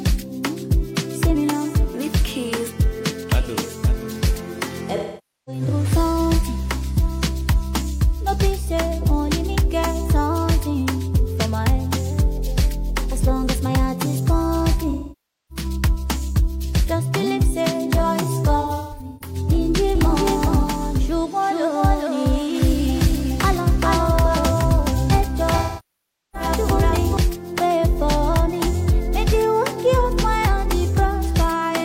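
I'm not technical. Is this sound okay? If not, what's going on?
No. At four moments the sound turns smeared and hissy or hollow, or briefly fades away and back: 4.96 to 5.62 s, 14.90 to 15.65 s, 18.61 to 19.36 s (several short dropouts, the longest about a sixth of a second), and 25.57 to 26.49 s. This is AAC frame loss with concealment. Pieces of the compressed stream went missing, and the player guessed at the gaps from the sound just before them.

From 19.95 s to 27.17 s there is a doubled audio track. Everything is heard twice, with a second copy just as loud trailing about 0.4 s behind like a dry echo, and it starts and stops abruptly. The likely cause is the same sound being recorded again through a slower route, or an edit leaving two misaligned copies mixed together.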